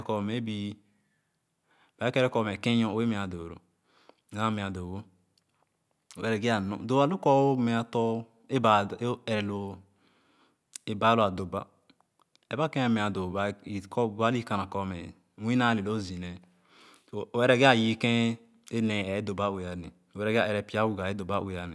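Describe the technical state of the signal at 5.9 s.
Around 5.9 s the speech signal is intact, with no audible fault at that moment.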